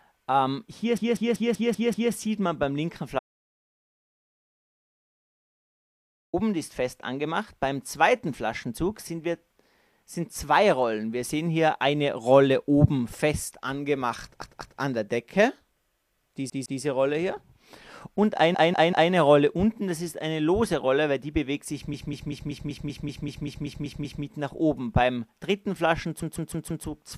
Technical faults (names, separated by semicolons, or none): repeated frames; audio dropout to silence